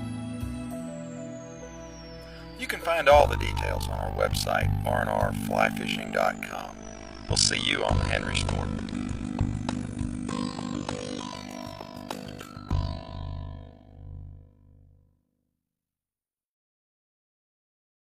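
Frames of the audio were windowed and overlap-added back together with a window overlap that does not sum to a constant gain, so from 3.2 s to the end the level is modulated by about 60 dB around 50 times a second. This overlap-add ripple is heard as a harsh, buzzing, robotic tremolo. Between 6.56 and 11.6 s, a hybrid receiver lost its digital stream and blended to the analogue FM broadcast, then back, with each cross-fade lasting 330 ms. During that stretch, the level shifts by about 2 dB, and faint FM hiss sits well below the signal.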